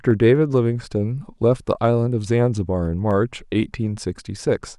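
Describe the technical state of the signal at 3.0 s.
At 3.0 s, periodic USB or driver dropouts (0.11–4.61 s) skip sub-millisecond slivers every 0.25 s, giving regular ticks seen as evenly spaced vertical spectrogram lines.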